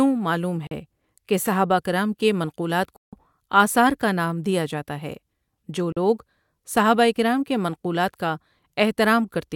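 At 0.67 to 0.71 s, 2.96 to 3.13 s and 5.92 to 5.97 s the speech cuts to silence for about 40, 160 and 40 ms, most likely Bluetooth dropouts from lost packets. Unlike a stall, the speech resumes further on, as if it had played through the gap.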